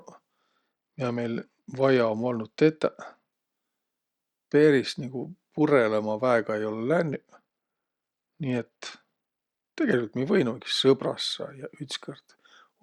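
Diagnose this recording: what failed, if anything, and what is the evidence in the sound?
Bluetooth SBC bit pool drop, 0.40–3.32 s and 7.07–9.92 s, ending just before "mi võinuki": a codec-stage fault. The speech dulls and turns gritty, which fits the bit pool falling from 31 to 11, near 83 kbps, starving upper sub-bands and coarsening the rest.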